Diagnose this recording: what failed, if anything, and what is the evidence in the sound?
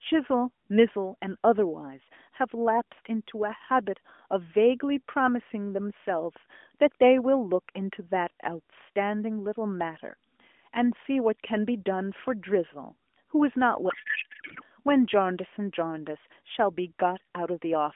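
Codec payload misread at the AMR codec: from 13.9 to 14.62 s the speech turns to garbled warble, not packet-loss silence, fitting octet-aligned frames unpacked as bandwidth-efficient.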